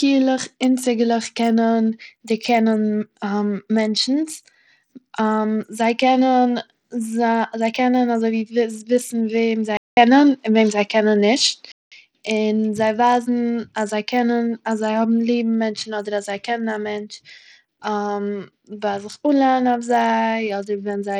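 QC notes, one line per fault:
Throughout: Bluetooth SBC compression. The top of the spectrum is thin and unstable, with treble that flickers in and out, and a gritty, grainy noise with aliasing rides on the speech. The likely cause is SBC coding at a low bit pool, which fits roughly 80 kbps. The upper sub-bands are starved of bits and the remaining bands are coarsely quantised, so the damage is plainly audible across the whole recording.
9.77 to 11.92 s: input switched to a poorer device. A silence of about 200 ms opens the span, after which the sound turns dull and boxy, with nothing above 7.6 kHz. The level shifts by around 5 dB, and a new noise floor appears roughly 50 dB below the signal. The likely cause is the input changing to a different, narrower-band device with its own tone, gain and background noise, which then gives way again at 11.92 s.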